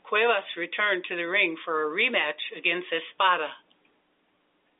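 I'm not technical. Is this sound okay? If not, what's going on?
Yes, no faults: it is ordinary telephone-line speech, so the thin, narrow sound with nothing above about 3.8 kHz is simply how a standard phone call sounds, not damage.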